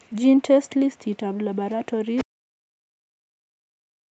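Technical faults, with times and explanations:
2.16–2.24 s: other side's voice leaking through. A brief scrap of a second, quieter voice slips in under the talker, about 10 dB below the main speech. It lasts only about 80 ms. The likely cause is a loudspeaker playing the far end into the microphone while the echo canceller left a residue.
2.24 s to the end: speech suppressed in double talk. From this point the talker's voice sinks sharply, falling by around 40 dB at its deepest. Both sides were talking at once. The echo canceller likely could not tell its own talker apart from the loudspeaker echo. It clamped down on everything, taking the wanted voice down with the echo. The sound stays dull beneath the call path's 8 kHz ceiling.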